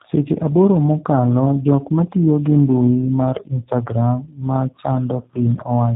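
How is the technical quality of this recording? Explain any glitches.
The quality is poor, with one fault running through the whole clip. Tandem speech coding: from start to finish, the speech has passed through two low-rate speech codecs in a row, each re-encoding the other's already degraded output. It sounds rough, muffled and warbly, with nothing above about 3.8 kHz, which fits a GSM-style coder followed by a G.729-type coder.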